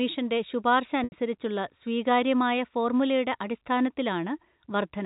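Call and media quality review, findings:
Brief buzzy held tone at 1.04 s, lasting 80 ms to 1.12 s. Packet loss with pitch repetition: receiver concealment repeating the last pitch period across the gap. Telephone band-limiting from G.711 coding.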